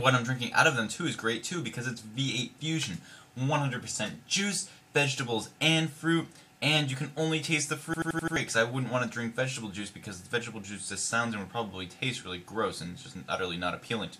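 At 7.94 s the audio locks into a system hang loop until 8.36 s: the playback device kept reading the same stretch of its ring buffer after the host stalled. An 85.33 ms slice, which fits a 4096-sample buffer, repeats exactly five times at 11.7 Hz, a machine-gun stutter. Unlike an underrun, the repeats are identical copies with no silent gaps. When it ends, roughly 0.4 s of audio is missing.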